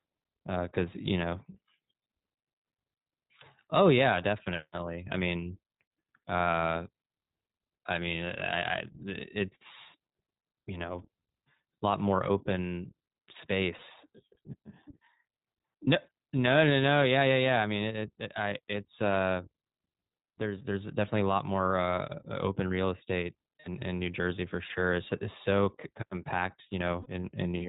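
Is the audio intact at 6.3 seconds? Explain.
No. At 6.3 seconds, as everywhere in this speech clip, the audio has passed through the iLBC codec. Each 20 ms frame's excitation is coded on its own, without drawing on the previous frame, at a rate consistent with iLBC's 15.2 kbps mode, and the narrowband path discards everything above 4 kHz. The damage is plainly audible: the speech sounds muffled and band-limited, with a rough, slightly synthetic texture.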